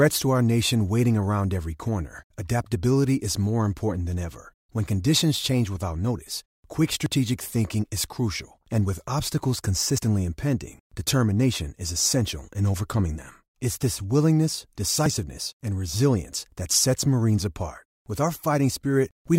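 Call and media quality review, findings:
Dropped buffer (overrun) in the speech at 7.06 s (after "change without notice quick"), 9.98 s (after "crucial and with obstacles") and 15.06 s (before "and resilience that sets"). Each is a skip forward with no gap: about 20 ms, 40 ms and 20 ms lost. Likely capture-side overrun, where samples are overwritten before being read.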